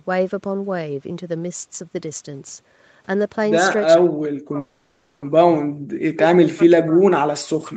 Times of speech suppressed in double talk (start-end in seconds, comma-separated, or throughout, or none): 4.00-7.76